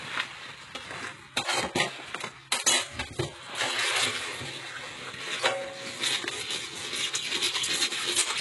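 A recording of sounds, heavily damaged throughout: the treble is synthetic, with gritty, metallic sibilant and transient detail and nothing above 11.5 kHz. This is likely HE-AAC compression, rebuilding the top band from copied lower bands, consistent with about 12 kbps.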